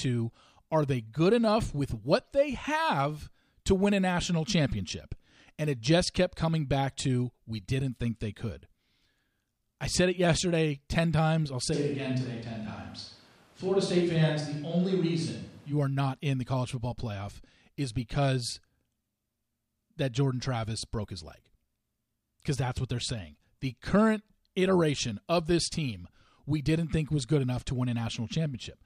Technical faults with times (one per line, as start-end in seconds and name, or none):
11.75-15.71 switch to a distant microphone